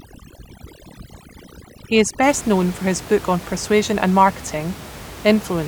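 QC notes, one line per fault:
0.0–2.23 s, overdone noise removal: noise reduction set far too hard clamps individual frequency bands whenever they sit near its noise estimate, so the room noise drops and breaks up into twinkling specks, clearing just before "known for his book".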